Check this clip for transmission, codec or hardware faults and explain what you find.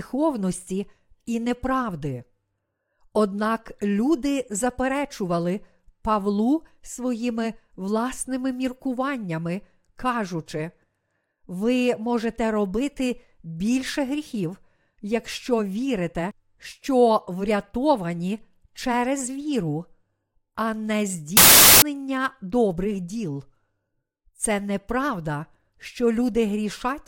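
One fault stands out, a wrong sample width from 21.37 to 21.82 s. Packed 24-bit samples are being read as 16-bit, so byte boundaries misalign and loud noise buries the speech, which plays at 0.667 times speed and lower pitch. That slowdown distinguishes it from a byte-order error, which keeps the timing intact.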